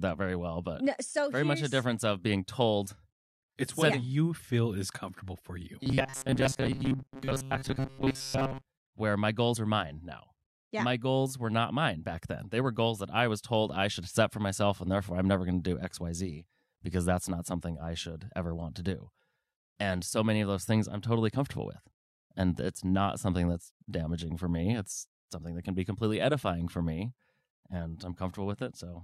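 From 5.81 s to 8.65 s, just after "is comfortable for you" and before "where my goals are", the audio is likely starved of fresh data, so the playback side keeps looping its most recent short buffer, around 7.5 ms, in place of the missing audio. Roughly 70% of that stretch is repeated material. The result is robotic sound from repeated short buffers: the speech collapses into a hard, metallic buzz locked near 134 Hz, still loosely following the phrasing.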